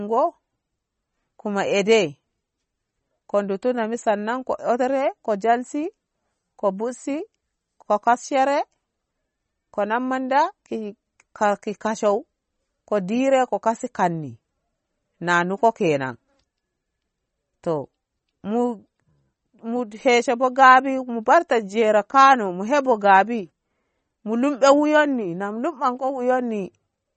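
A speech clip carrying damage that most likely comes from MP3 compression throughout, at a low bitrate that fits about 32 kbps. Short of bits, the encoder has discarded everything above 8.4 kHz and dropped weak frequency lines that flicker on and off from frame to frame. The result is plainly audible: a dull top end with a watery, swirling texture, metallic chirping on s sounds, and consonant onsets smeared rather than crisp.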